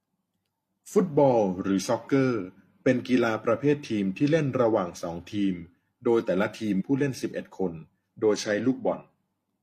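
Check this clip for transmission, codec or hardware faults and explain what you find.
One fault, compressed frames skipped, at 6.76 to 6.82 s. The speech jumps forward by roughly 150 ms. That fits about three 42.7 ms frames being lost or rejected by the decoder.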